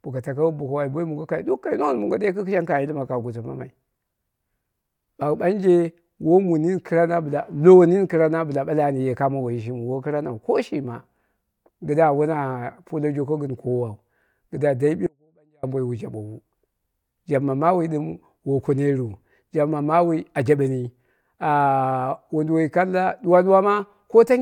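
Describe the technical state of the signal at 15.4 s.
The signal path likely lost its input but stayed live: an audio dropout to a faint residue, 15.07 to 15.63 s, cutting abruptly to a leak about 40 dB down.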